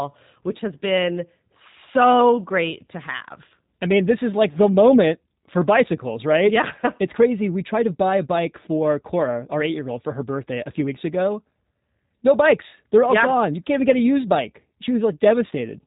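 Throughout, the speech sounds rough, faintly synthetic and dull, with nothing above 3.8 kHz. This is the G.729 codec rebuilding it from sparse pulses, which fits an 8 kbit/s stream.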